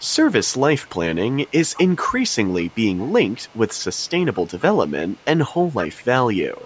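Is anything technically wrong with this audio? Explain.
Yes. There is an echo leak at 0.00–0.14 s, 0.58–0.89 s, and from 1.47 s to the end. A faint copy of the speech trails the original by about 203 ms. It is very low in the first span, roughly 35 dB down, and rises to about 25 dB below the speech in the later two. This is likely a far-end loudspeaker whose echo canceller let part of the pickup pass back into the call, giving a delayed repeat behind the speech.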